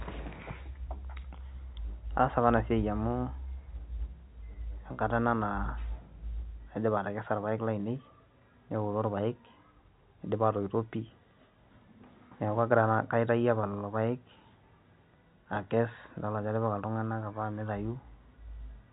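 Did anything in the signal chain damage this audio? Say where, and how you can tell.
No, nothing in the chain damaged this speech.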